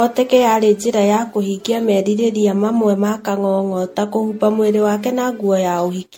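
Speech runs through the whole clip with a swirly, hollow, smeared quality and softened consonant attacks, worse than a single lossy encode would give. The likely cause is generation loss: repeated MP3 decoding and re-encoding, at a rate that fits about 64 kbit/s and around seven passes, each requantising on a shifted frame grid. A spectrogram would show nothing above 16.5 kHz, patchy holes and speckled noise in the upper bands, and blurred onsets in the waveform.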